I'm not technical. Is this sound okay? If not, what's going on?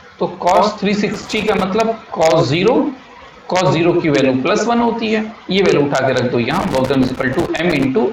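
No. A plug or cable contact is loose, causing loose connector crackle: the signal keeps cutting in and out, giving scratchy bursts from 1.14 to 1.63 s and 6.51 to 7.85 s.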